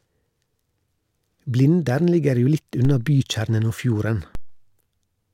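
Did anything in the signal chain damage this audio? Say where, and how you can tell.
Yes: at the converter, DC steps at 2.85 s and 4.35 s. Each is a low thump as the baseline jumps about -19 dBFS, then decays through a roughly 2 Hz high-pass.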